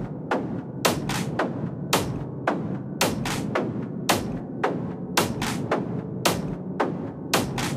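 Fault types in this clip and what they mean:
Chunks out of order: one 10 ms chunk of the sound plays one chunk late, so two neighbouring slices swap places around 3.35 to 3.37 s. No audio goes missing, but the reordering creates three abrupt joins, heard as a brief jumbled flick. Unlike a dropout or skip, nothing is silenced or removed, and unlike a repeat, no material plays twice. The same content simply arrives in the wrong sequence.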